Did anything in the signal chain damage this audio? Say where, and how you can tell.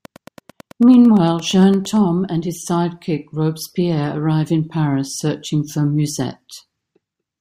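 Yes, a train of clicks from 0.05 to 1.97 s: about twenty regular ticks at 8.9 per second, as loud as the speech, likely analogue interference or a faulty connection.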